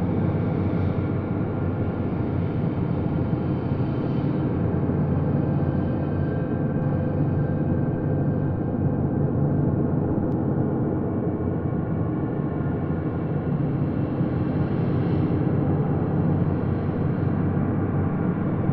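From 6.82 s to 10.32 s the audio carries a doubled audio track: a second, full-band copy of the same material runs about a second behind the original, roughly 5 dB quieter. The copy has no decay or room colour, so it reads as a clean overlapping repeat rather than an echo, and it cuts in and out abruptly at both ends. The likely cause is the signal being captured twice, once through a slower path.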